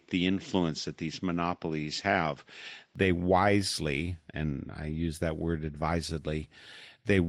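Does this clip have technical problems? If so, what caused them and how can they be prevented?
Yes: from 0.0 to 2.96 s, just before "they wisely and I", the sound is duller, with nothing above 7.6 kHz and a faint new noise floor. It's likely an input switched to a poorer device. Locking the input device for the whole session would prevent it.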